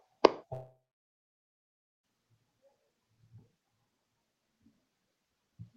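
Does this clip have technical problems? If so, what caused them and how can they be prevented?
Yes. The speech breaks off in a long network dropout from 0.53 s to 2.05 s, most likely caused by packets that stopped arriving for about 1.5 s. The receiver filled the gap by stretching the last sound into a fading buzz or hiss, which dies away after a fraction of a second and leaves about 1.27 s of silence. The speech then resumes with that 1.5 s permanently missing. A steadier connection with a larger jitter buffer, plus redundancy or retransmission, would prevent it.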